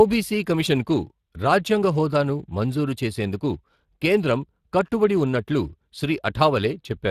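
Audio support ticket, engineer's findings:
Speex codec, whole clip (0 to 7 s). Speech plainly hoarse and noisy, grainy texture on every voiced stretch. Bandwidth stops at 15.3 kHz. CELP coder short of excitation bits, so the buzz under the voice is rebuilt coarsely; sound points to roughly 22 kbps. Distinct from MP3/AAC damage: no swirling, warbling or pre-echo smear, just rough, hissy voicing tied to the speech itself.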